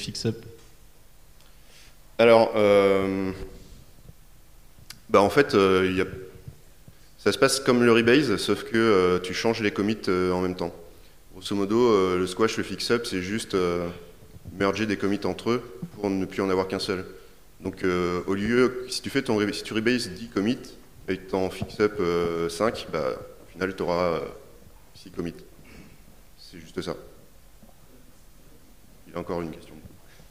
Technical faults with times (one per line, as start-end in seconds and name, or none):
none